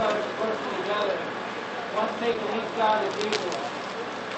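Short concealed packet loss at 2.33 to 2.36 s: about 20 ms of audio failed to reach the decoder in time, so the receiver extended the preceding sound to cover the gap before crossfading back into the real signal. It sounds like a brief smear or wobble within sound that is band-limited near 8 kHz, as an Opus call path would give.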